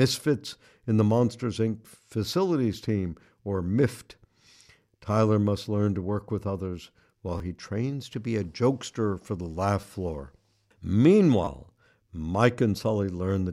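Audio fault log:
7.38–7.40 s, 9.81–9.83 s and 11.45–11.47 s: repeated buffer, a tiny slice replayed twice with hard joins, heard as a quick buzz or click that fits a 10 ms buffer. The first falls between "work with others while" and "he trains to be", the second just after "jokester for the laugh". Each costs roughly 20 ms of audio.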